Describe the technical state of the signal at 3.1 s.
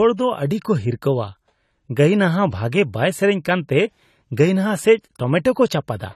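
At 3.1 s the speech carries damage present throughout the clip, likely from AAC compression at a low bitrate around 32 kbps: quantised frequency lines leave a dull, smeared, fizzy sound. A spectrogram shows a hard ceiling at 14.1 kHz.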